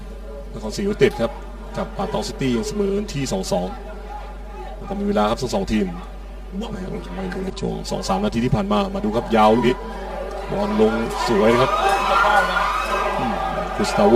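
Throughout the clip, channel delay (comb filtering) gives the sound a hollow, phasey colour. One channel runs around 5 ms late before the mono sum, cutting notches from about 100 Hz upward at even spacing. Unlike flanging, these notches stay fixed rather than sweeping.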